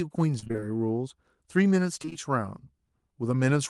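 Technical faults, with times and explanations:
0.39–0.64 s, repeated packet loss (robotic sound): six short holes open in quick succession, the longest 27 ms. Each is patched by extending the preceding sound, so about half of this quarter-second is filler rather than real speech. That produces a choppy sound with pieces missing. Because the holes arrive as a rapid series instead of once, it sounds choppy rather than like a single dropout or click.
2.02–2.17 s, repeated packet loss (robotic sound): four holes, none longer than 19 ms, are again filled by continuing the last sound, covering just under half the span. The same brief choppy stutter returns, shorter than the first. It is set apart from steady codec roughness, including the top end rolling off at 12 kHz, by appearing only in these bursts.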